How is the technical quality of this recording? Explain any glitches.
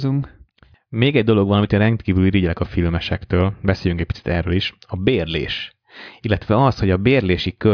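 No technical faults are audible.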